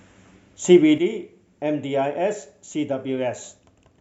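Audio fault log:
0.98 s to end: sudden gain jump, the speech and its background noise drop together by about 7 dB in one step, likely a digital gain change applied without a ramp.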